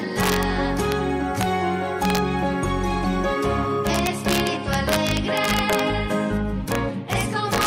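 A gain or summing stage suffers integer overflow: when peaks exceed the largest value the integer can hold, they wrap to the opposite sign instead of being limited. Even though the signal is overdriven by no more than about 2 dB, each overshoot flips across the full range. The result is violent cracks, much harsher than clipping, at 0.2 to 0.43 s, 0.92 s, 1.41 s, 2.03 to 2.18 s, 3.87 to 5.79 s, 6.72 to 6.75 s, and from 7.13 s to the end.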